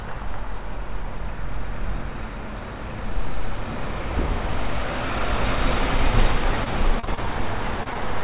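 From 6.64 to 7.19 s there's repeated packet loss, giving that robotic sound. Four holes land close together, the longest 32 ms. Each is patched by stretching the last bit of sound, so about a sixth of that stretch is filler, and it comes out choppy.

Right after, there's short concealed packet loss twice, at 7.83 to 7.88 s and 7.94 to 7.97 s. Each time a few hundredths of a second went missing and got papered over with a continuation of the preceding sound before blending back in. You hear a quick smear or wobble in the narrowband call audio, which has nothing above 4 kHz.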